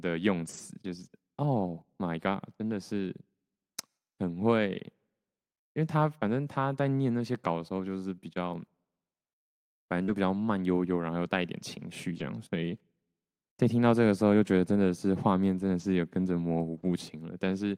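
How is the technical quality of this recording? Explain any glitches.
The recording has two kinds of network glitch, clustered around 10 seconds and scattered elsewhere.

Lost packet rebuilt from error correction occurs at 0.41–0.59 s, 10.08–10.14 s, 12.16–12.22 s, 15.80–15.82 s and 16.74–16.84 s. Each lost stretch was replayed from a low-bitrate backup copy carried in the following packet, so the speech continues unbroken but turns briefly rougher and noisier. The first event lasts about 100 ms, consistent with roughly five lost packets. Unlike concealment, nothing is smeared.

Short concealed packet loss occurs at 10.03–10.10 s, where about 40 ms never arrived and had no backup. The decoder extended the preceding sound and then crossfaded back, giving a brief smear or wobble rather than the grainy texture of the rebuilt frames. Error-correction recovery takes over immediately afterward.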